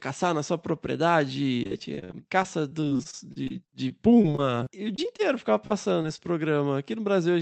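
Repeated packet loss (robotic sound) runs from 1.63 to 5.21 s: 27 gaps, the longest 55 ms, each patched by extending the previous sound, so roughly 15% of that stretch is synthetic and the speech turns choppy and robotic.

Short concealed packet loss follows at 5.67–5.72 s, 6.02–6.06 s and 6.16–6.20 s. Each time about 20 ms never arrived and was filled from the preceding sound, heard as a brief smear or wobble.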